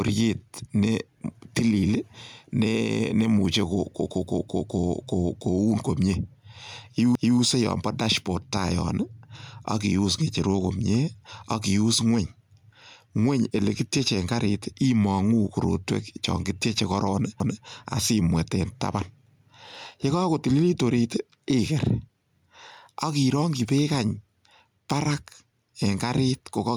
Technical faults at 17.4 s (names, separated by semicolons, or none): gain pumping; overlapping chunks